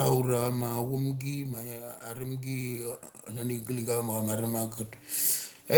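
Automatic gain falling runs from 0.05 to 2.03 s. The gain control judged the incoming speech too loud, or its background too strong, and pulled its gain down by about 11 dB over those two seconds, so the speech and its background sink together in one steady fade.

Automatic gain rising follows from 2.01 to 4.85 s. The control now treated the input as too quiet and lifted its gain by about 14 dB. The speech swells back up over nearly three seconds, with the background noise rising along with it.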